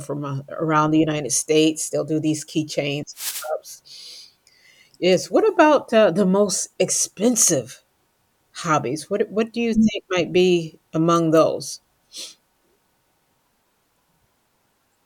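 At 3.13 s, right after "do these keychains", a wireless microphone noise hit lasts about 0.38 s: the radio link fades, receiver hiss swells into a swish of static over the speech, unlike a digital dropout, which cuts to silence.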